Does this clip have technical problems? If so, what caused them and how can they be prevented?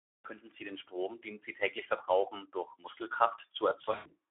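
Yes. Throughout, the speech sounds hoarse, noisy and somewhat thin, confined to roughly 250 Hz to 3.5 kHz: Speex codec damage, where too few bits for the excitation leave a rough, grainy voice, consistent with a low setting near 11 kbps. Raising the Speex quality setting or using a modern wideband codec prevents this.

From 3.81 to 4.15 s the voice smears into a fading buzzy, coloured tone and stays weak afterwards: VoIP packet loss concealed by the speech codec. About 160 ms went missing across 240 ms, the longest gap near 100 ms, so the decoder kept extrapolating its last pitch and filter while lowering the gain. A jitter buffer with forward error correction or redundancy prevents this.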